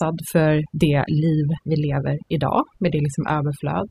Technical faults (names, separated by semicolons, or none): overdone noise removal